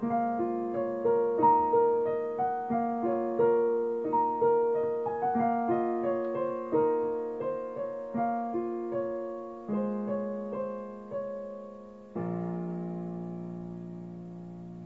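No technical faults can be heard anywhere in the clip.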